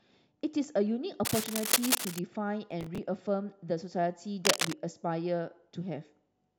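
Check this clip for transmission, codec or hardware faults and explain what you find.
Three hardware faults are audible: two stretches of cable scratch noise and one burst of processor overload crackle.

Cable scratch noise occurs from 1.25 to 2.19 s, at roughly the same level as the speech, and again from 4.45 to 4.73 s, somewhat louder than the speech. Both are dense, irregular rustling and scratching laid over the sound. The likely cause is a worn cable, connector or control being moved so that its contact resistance jumps about rapidly. Unlike overload crackle, this noise is added on top of otherwise continuous audio rather than breaking it apart.

Processor overload crackle runs from 2.71 to 2.98 s as a gritty, tearing burst. The processor fell behind again and again on audio buffers, each only a few milliseconds long. Every missed deadline replayed a fragment of stale audio with hard edges. 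That repetition of old material is what distinguishes it from cable scratch: the signal itself stutters and tears instead of gaining a layer of noise, and the crackle stops once the load passes.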